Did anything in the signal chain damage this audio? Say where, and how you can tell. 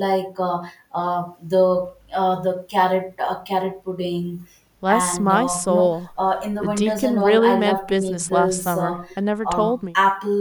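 No, nothing in the chain seems to have damaged this speech; there's no point where any stage leaves a mark you can hear.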